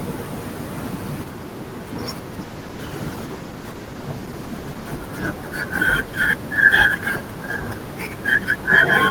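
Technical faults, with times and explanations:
2.42–4.99 s, call bitrate drop: the speech turns rough and watery, and the top end goes dull for about 2.5 s. That fits the call's bandwidth estimate falling and the encoder dropping from around 32 to 15 kbps, coding more coarsely until the rate recovers.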